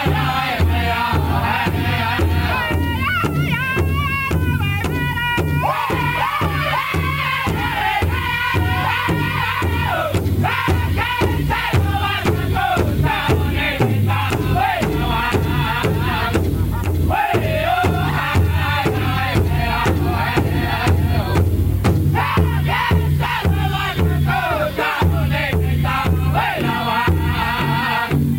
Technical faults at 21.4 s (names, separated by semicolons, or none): low bit depth with noise shaping